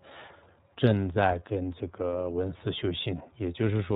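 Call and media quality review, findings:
iLBC codec damage across whole clip. Speech band-limited, nothing above 4 kHz. Dull, rough, slightly synthetic texture. Each block coded on its own, no carry-over from the previous one. Graininess fits the iLBC 30 ms frame mode at about 13.33 kbps.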